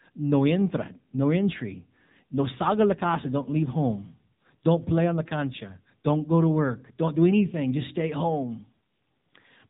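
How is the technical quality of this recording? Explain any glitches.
The recording is noticeably degraded by mobile-phone coding across its whole length. AMR narrowband mobile codec, throughout: a pulse-driven vocal-tract model leaves the speech buzzy and synthetic with nothing above 3.8 kHz, consistent with a low bitrate near 8 kbps.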